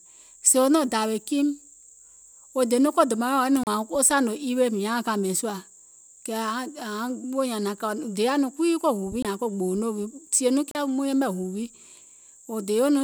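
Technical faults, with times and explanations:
3.63 s, 9.22 s and 10.71 s: Bluetooth stall. The speech drops to silence three times, for 35 ms, 23 ms and 37 ms, then resumes. This is likely radio interference delaying packets until the headphones' buffer emptied and playback paused awaiting retransmission.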